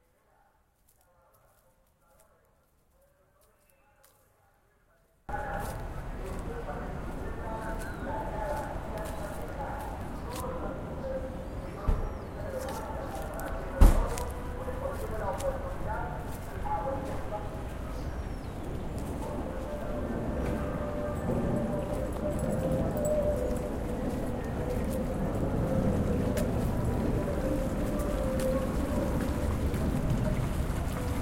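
From the start to 5.29 s the sound collapses to a faint remnant, about 30 dB down. The likely cause is one channel inverted: with one side's polarity reversed, everything common to both channels cancels in a mono sum, leaving only their difference. Unlike a dropout or mute, the sound never goes fully silent. A weak residue persists until the level returns at 5.29 s.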